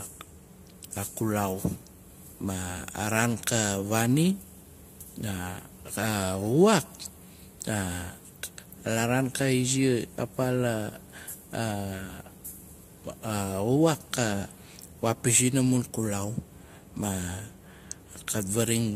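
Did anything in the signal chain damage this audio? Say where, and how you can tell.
Yes, at the codec stage: the speech was likely encoded by one lossy codec and then re-encoded by another, which is transcoding between lossy codecs. Throughout the clip, nothing is present above 15.2 kHz, and two layers of coding artefacts can be heard at once. The character points to AAC followed by Vorbis at moderate bitrates. The second encoder spends bits reproducing the first encoder's artefacts and adds its own, and the lower cut-off is never restored.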